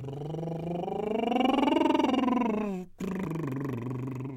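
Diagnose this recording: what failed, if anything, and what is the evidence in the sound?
A CD skip at 3.25 s, a playback fault at the disc transport. The music drops out for a very short moment, a few milliseconds, heard as a tick. It then resumes from a different point, because the laser jumped to another turn of the disc's spiral and the player muted while relocking.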